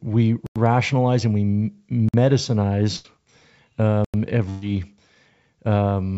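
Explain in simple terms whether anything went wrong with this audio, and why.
Two kinds of fault can be heard in this speech. The first is a block of digital silence, at 0.46 s, 2.09 s and 4.05 s. The sound drops to total silence and then returns with no fade. The gaps at 0.46 s and 4.05 s last about 93 ms, which fits a program missing a 4096-sample output buffer. The one just after "and we" lasts about 51 ms.

The second is a burst of packet loss, at 2.96 s and 4.50 s. Chunks of the call audio arrived too late or not at all. The receiver stretched the last sound into a fading buzz or hiss for about 80 ms and 120 ms. The speech then jumps ahead, and the part in between is gone.

The call codec itself sounds as expected, with nothing above 8 kHz.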